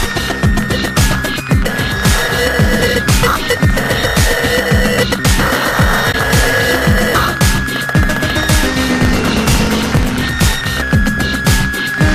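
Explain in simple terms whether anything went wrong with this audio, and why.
Two things go wrong in this audio.

At 6.10 to 6.15 s there is a corrupt frame decoded. The sound is stored in small compressed chunks. A couple of those chunks got damaged, but the player played them anyway. The damaged data pushed sound to the wrong pitches for that moment. You hear a brief chirp or blip that lasts about as long as those two chunks.

From 8.87 to 10.53 s there is a block size mismatch (truncated). One step hands the audio along in chunks that are longer than the next step accepts. The next step keeps the start of each chunk and throws the end away, which fits chunks of 1024 samples being cut short. Each cut makes a click, and the clicks come 50 times a second, so they blend into a steady buzz. With pieces missing, the sound runs about 1.16 times too fast, while its overall tone color stays about the same.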